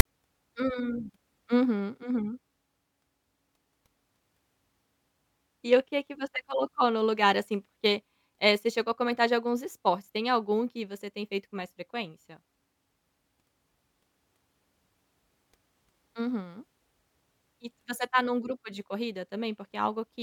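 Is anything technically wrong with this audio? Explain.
Yes. File tags played as audio occur from 0.00 to 0.05 s: a block of text metadata at the start of the speech file is decoded as sample values, producing a loud, harsh rasp pushed off-centre, followed by abrupt silence where zero padding follows, with hard edges before speech begins.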